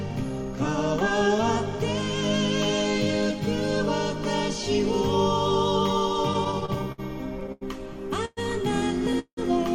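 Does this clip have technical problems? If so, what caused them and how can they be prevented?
Yes. Repeated stalls (stutter) run from 6.33 to 7.0 s: the audio catches six times, the longest hold about 60 ms, with 126 ms of filled sound in all, roughly a fifth of that stretch. Packets were arriving late or slower than playback, so the jitter buffer kept draining, and the receiver extended the last sound each time until data came in. Nothing drops out, but the passage drags and stutters. A larger or adaptive jitter buffer, fed by a steadier network path, would prevent this.

A short stall from a late packet follows at 7.52 to 7.63 s. A single packet missed its slot, the buffer emptied, and the receiver stretched the preceding sound for 90 ms before resuming from the same point. The result is one sound held too long, with a slight buzz or dip, though nothing is lost. Giving the buffer a little more headroom against delay jumps of this size would absorb it.

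Call audio freezes occur at 8.25 to 8.39 s and 9.19 to 9.39 s. In each, the sound hangs as a fading buzz or hiss, for 117 ms and then 179 ms, with the second freeze sinking into about 70 ms of silence before the audio picks up where it left off. The likely cause is packets held up in transit, leaving the jitter buffer empty until they arrived. Prioritising call traffic (QoS) and avoiding congested or unstable links would prevent these freezes.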